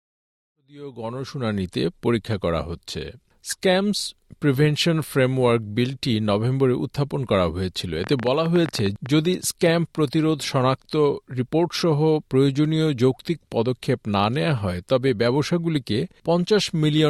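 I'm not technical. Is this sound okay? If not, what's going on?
No. From 8.04 to 9.07 seconds, a burst of ticking or popping sits on top of the sound, about fifteen sharp clicks in roughly one second, arriving unevenly at around 13 per second. This is a train of clicks: something kept injecting short pulses into the audio for that stretch, likely electrical interference from nearby equipment or a faulty connection or power supply. The gentle fade-in at the start, settling by about 1.94 seconds, is deliberate.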